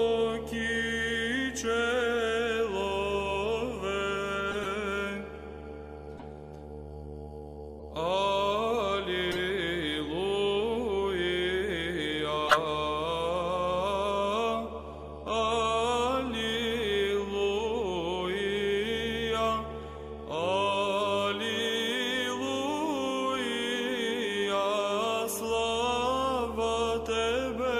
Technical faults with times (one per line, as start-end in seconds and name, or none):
4.51-4.67 corrupt frame decoded
6.16-6.27 corrupt frame decoded
7.74-7.84 corrupt frame decoded
9.31-9.38 corrupt frame decoded
12.47-12.58 corrupt frame decoded